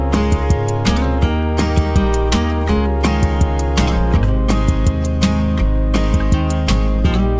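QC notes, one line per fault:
No faults to log; the audio reached the call path with its content ending at 8 kHz, which fits a wideband call codec working as intended.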